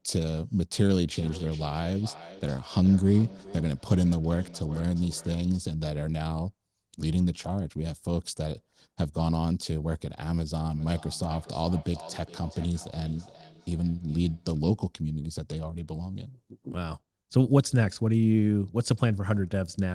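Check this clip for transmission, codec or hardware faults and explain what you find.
There's a feedback echo between two devices here, in two stretches: 1.12 to 5.74 s and 10.74 to 14.72 s. The speech comes back roughly every 400 ms, peaking at about -18 dB below the talker in the first stretch and about -20 dB in the second. Two devices on the same call are sharing a room, so one device's microphone picks up what the other plays, and neither echo canceller catches sound coming out of the other device's speaker.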